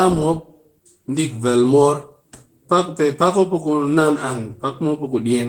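Speech runs throughout with Opus voice compression. The hoarse, faintly robotic coarseness in the lower band comes from SILK's prediction coder, while the top still reaches about 20.1 kHz through a CELT layer. That split, rather than MP3's swirly dullness, fits hybrid mode near 16 kbps.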